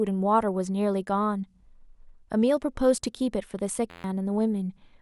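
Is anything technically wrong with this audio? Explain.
Yes. From 3.90 to 4.04 s there is a system hang loop: the machine stalled while the sound hardware kept replaying one 11.6 ms stretch, which fits a 512-sample buffer, twelve times. That exact repetition gives a steady 86.1 Hz buzz rather than a dropout's silence, and roughly 150 ms of speech is lost.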